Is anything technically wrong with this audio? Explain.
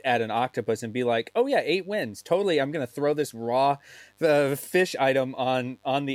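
Yes. Mains buzz runs throughout the speech, roughly 40 dB below it: sharp switching spikes twice per 50 Hz cycle spread harmonics into the kilohertz range, giving a steady, raspy buzz.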